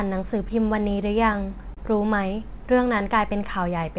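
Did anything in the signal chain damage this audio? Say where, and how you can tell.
Yes, two faults show up in this speech, both at the network and jitter-buffer stage of the call path. The band stops at 4 kHz, which fits G.711 A-law at 64 kbps. Its coding noise and missing top end come from the codec and are not damage.

Throughout the clip there are small timing hiccups at uneven intervals, where short bits of sound are briefly repeated or held, or the flow jerks slightly. This is clock drift between sender and receiver. The sender's clock runs about 2 percent slow relative to the receiver's, so the jitter buffer keeps draining. To cover the shortfall, the receiver repeatedly stretches or repeats short pieces.

At 1.74 to 1.79 s a sound is held too long, with a faint buzz or dip. This is a short stall from a late packet. The packet wasn't there when it was due, so the jitter buffer ran empty. 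The receiver stretched the last sound by 28 ms, then resumed from the same point once the packet arrived. Nothing is lost, but everything after it is 28 ms later.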